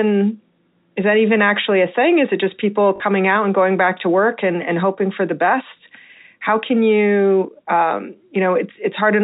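After "it just people", at 2.96 s, packet loss with last packet repeated replays a stale chunk for 40 ms: a short robotic stutter, visible as copied waveform blocks with abrupt joins.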